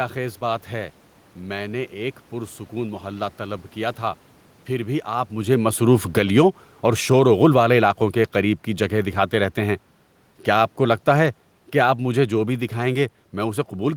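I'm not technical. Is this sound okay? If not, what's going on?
No. Automatic gain falling begins at 5.38 s and continues to the end. The recorder's automatic volume control judged the input too loud and kept turning itself down, so the voice and the room noise behind it sink together, just after the talker moves at about 5 s.

Automatic gain rising happens briefly from 6.32 to 6.73 s. During that stretch the same control decided the sound had become too quiet and nudged the volume back up a little. Voice and background swell together for those moments before the downward drift resumes.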